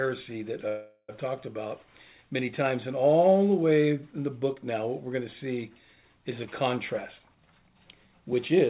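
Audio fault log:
0.68–1.1 s, call audio freeze: the last sound is stretched into a fading buzz for about 0.4 s, with only a brief silence, then the audio resumes exactly where it stopped. Nothing is skipped, unlike a dropout, which points to a likely stall in packet delivery that emptied the jitter buffer.
7.19–8.6 s, jitter buffer speed-up: the audio runs at about 127% speed, hurried but at unchanged pitch, because the receiver trims short pitch-period slices repeatedly to drain excess buffered delay, removing roughly 0.4 s in total. Unlike a sample-rate error, the pitch does not rise.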